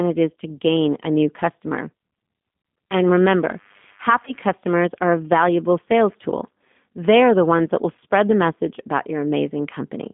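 Throughout the clip, the speech carries plainly audible G.729 codec damage, consistent with the 8 kbit/s G.729A coder. Each 10 ms frame is rebuilt from a vocal tract filter, pitch predictor and a few pulses, giving a rough, synthetic edge. The line band runs from 200 Hz to 3.5 kHz.

From 4.25 to 4.33 s, VoIP packet loss concealed by the speech codec is heard. About 20 ms of audio is missing, which points to a single lost packet. The decoder extrapolated from its last pitch and filter state, and the recovering frames leave a brief weak or distorted stretch.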